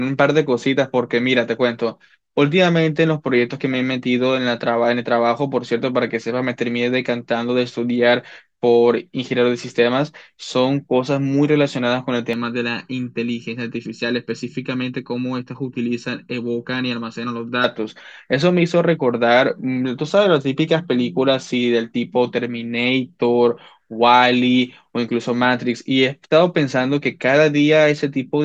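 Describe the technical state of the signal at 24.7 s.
At 24.7 s the speech signal is intact, with no dropout, distortion, glitch or other technical fault to be heard at that moment.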